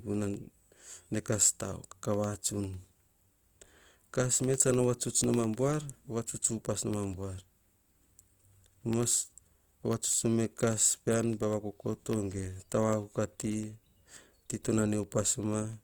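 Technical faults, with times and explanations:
Throughout: Opus compression, likely the cause of plainly audible codec damage. The band energies are held, but starved bands are filled by folding or noise, so the speech has a grainy, rough texture rather than swirl. The response extends to about 20.1 kHz, which fits CELT mode around 24 kbps.
0.14 to 15.73 s: periodic USB or driver dropouts. Every 0.1 s, roughly 150 times, a fraction of a millisecond of audio is replaced by silence when a background task stalls the bus or driver. The result is a steady train of ticks, audible only under signal.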